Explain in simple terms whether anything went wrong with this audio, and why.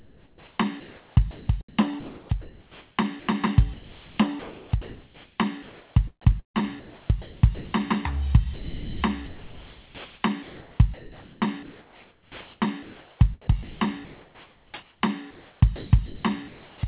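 The music keeps dropping out and being replaced by a soft, artificial hiss, in stretches from 0.0 to 3.29 s, 3.74 to 5.96 s, 6.22 to 7.73 s, 8.54 to 15.01 s and 15.31 to 16.81 s. This is sound chopped by the voice detector. The likely cause is that the sender's call system mistook parts of the music for silence and sent filler noise instead. It all comes through a phone-style call line that carries nothing above 4 kHz.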